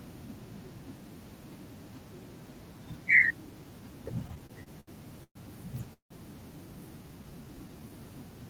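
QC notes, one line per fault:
4.27–5.37 s, repeated stalls (stutter): seven short holds, the longest 119 ms, where the last sound is carried on while packets arrive late. About a quarter of this span is filler, with nothing lost. Unlike a single freeze, the sound halts and resumes again and again, so it drags unevenly.
5.93–6.12 s, call audio freeze: the sound stops and its last moment is held, then fades to silence for about 110 ms before resuming exactly where it left off, adding 171 ms of delay. This is likely a single late burst of packets emptying the buffer. It is one clean gap with a fade, not a run of stutters.
7.03–7.90 s, jitter buffer slow-down: the audio plays at 86% speed with its pitch unchanged, stretched by 130 ms as the receiver repeats individual pitch periods to build up its reserve. Nothing stops or fades. Instead, sounds are drawn out smoothly.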